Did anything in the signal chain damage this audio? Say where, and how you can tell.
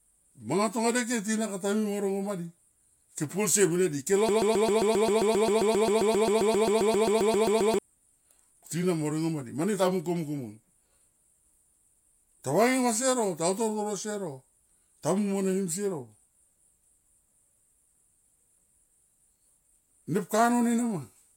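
Yes. From 4.29 s to 7.79 s, right after "ke polsie mene di", the speech jams into a broken-record loop: a 133 ms fragment repeats exactly, back to back, about 26 times. That's likely a stalled player or stream re-sending its last buffer, and whatever speech belonged there is gone.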